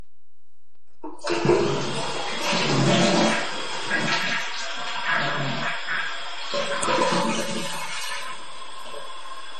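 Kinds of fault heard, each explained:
DC offset: the entire waveform sits shifted off the zero line by a constant amount across the whole clip. It is inaudible as such, but on a waveform display the trace rides above or below centre, and a spectrogram shows a steady band of energy at 0 Hz, eating into headroom.
MP3 compression: the sound has a watery, swirling quality throughout, with nothing at all above about 12.1 kHz. This is likely a low-bitrate MP3 encode, around 40 kbps, where the encoder cut the treble and let weak frequency lines flicker on and off. A spectrogram shows a hard ceiling and patchy, blocky holes below it.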